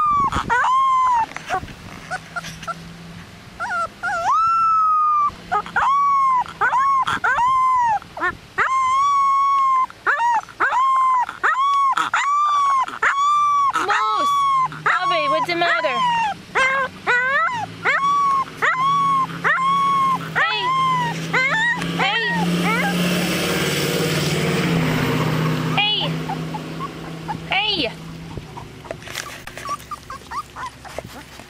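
DAB burbling: weak reception lets bit errors slip past error correction into the MP2 data. Corrupted samples put short noise blips into single sub-bands and corrupted scale factors make sub-bands jump in level, producing burbling at 1.06–2.02, 6.31–7.14, 10.34–11.30, 12.46–13.11, 16.10–17.09 and 24.74–25.07 s.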